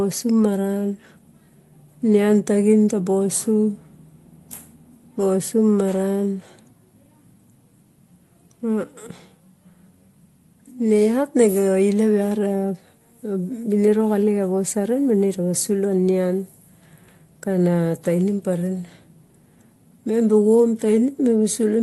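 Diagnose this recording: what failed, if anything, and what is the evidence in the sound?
Nothing in the speech recording points to a failure at any stage of the chain. It has passed through a WebRTC call path whose audio band stops near 12 kHz, which fits an Opus call codec running at about 32 kbps.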